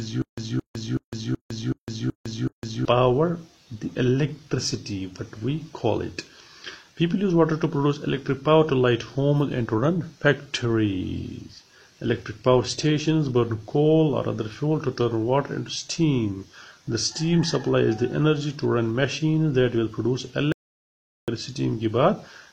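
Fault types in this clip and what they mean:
Stutter with silent gaps: from the very start to 2.85 s, a 220 ms fragment repeats seven times with 156 ms silences, likely a stalled stream replaying its last buffer.
Audio dropout to silence: from 20.52 s to 21.28 s the sound cuts to silence for 0.76 s, likely lost input, and that audio is gone.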